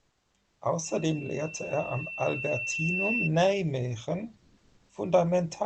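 Comfort noise in place of the background at 0.00–0.34 s, 0.45–0.61 s and 4.37–4.89 s: the room tone turns flat and featureless, about 3 dB and 1 dB quieter, then about 2 dB louder, likely from Opus DTX synthesizing noise while transmission pauses.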